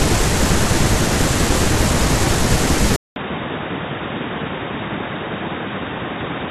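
At 2.96 s the audio cuts out for about 0.2 s, then returns duller, boxier and quieter for the rest of the clip. Nothing above 3.8 kHz remains, the level falls by around 10 dB, and a faint new background hiss appears. This is likely an input switched to a poorer device. A simple filter or codec bandwidth change would only narrow the band, without the gap, the level drop and the different noise floor.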